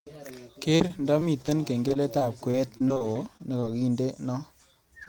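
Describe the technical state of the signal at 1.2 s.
Repeated packet loss (robotic sound) covers 1.2 s, within a stretch from 0.76 to 1.63 s. Seven short gaps, the longest 36 ms, are each patched by extending the previous sound, concealing about 17% of the span. The speech turns choppy, with fragments missing.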